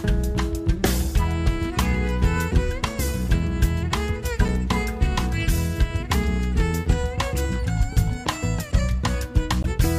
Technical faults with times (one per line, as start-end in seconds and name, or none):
4.48 damaged data in a compressed stream
9.60-9.65 damaged data in a compressed stream